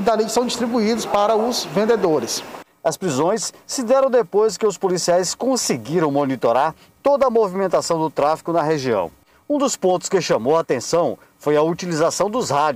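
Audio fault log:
Nothing stood out on listening to this audio.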